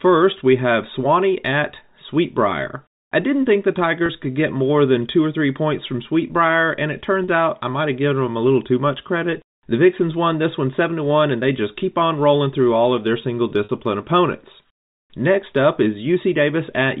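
Packet loss with pitch repetition occurs three times: 4.06 to 4.09 s (30 ms), 7.24 to 7.28 s (40 ms) and 13.64 to 13.69 s (50 ms), gaps that fit lost 10 ms packets. At each one the receiver fills the hole by repeating the last pitch period of the speech and fading it down. Each gap sounds like a brief held, buzzy tone before the speech cross-fades back in.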